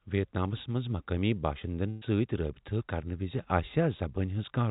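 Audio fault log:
1.90–2.04 s burst of packet loss: a run of packets on the call path arrived too late or not at all, so about 120 ms of the speech is missing. The receiver covered the hole by extending the last sound it had for about 115 ms and fading it. That leaves a brief held buzz or dimming hiss before the speech resumes further on. The narrow band, with nothing above 4 kHz, fits a G.711 codec.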